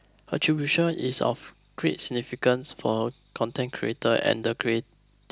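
No technical faults can be heard anywhere in the recording.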